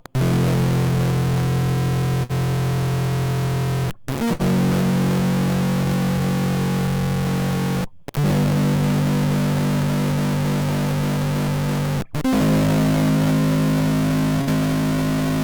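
From start to finish the music carries a distortion, the gritty edge sitting on every passage rather than coming and going. The likely cause is a stuck bit, one data bit held at a fixed value by a broken line or converter, so roughly half the samples are pushed off by that bit's weight. On a waveform the trace looks stepped and offset in places; a spectrogram shows broadband hash spread across the whole 15 seconds.

At 2.23 s, 4.33 s and 14.41 s there is a burst of packet loss, each lasting about 90 ms. In each case the playback holds onto the last sound for roughly 56 to 61 ms, letting it fade, then jumps ahead with about 60 ms of the music simply gone. On a spectrogram each event shows as a frozen, smeared band that dims and then cuts to new material. The waveform shows a decaying repeat followed by an abrupt discontinuity.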